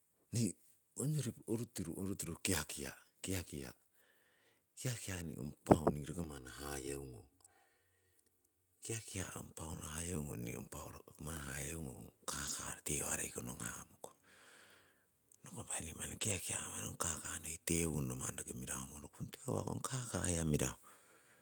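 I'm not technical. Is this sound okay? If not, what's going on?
No. Two kinds of fault can be heard in this speech.

From 6.24 to 9.13 seconds there is channel delay, which causes comb filtering. One side of the stereo sound arrives late by roughly three thousandths of a second. When both sides are mixed together, some pitches cancel out at regular steps, starting fairly low, near 200 Hz. The voice turns hollow and phasey, like it is coming down a tube. It sounds normal again after 9.13 seconds.

Four short moments are lost packets rebuilt from error correction. They come at 9.43 to 9.45, 12.45 to 12.51, 16.09 to 16.31, and 16.93 to 16.95 seconds. A small piece of the audio went missing in transit. The next piece carried a rough backup copy, and that copy was played instead. So nothing drops out, but those spots sound grainier and noisier. The one at 16.09 is the longest, at 120 milliseconds.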